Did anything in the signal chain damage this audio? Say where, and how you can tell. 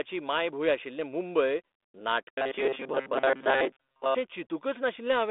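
Yes. A rigid 134 Hz metallic buzz from 2.34 to 4.18 s is robotic sound from repeated short buffers, likely an underfed buffer repeating 7.5 ms chunks.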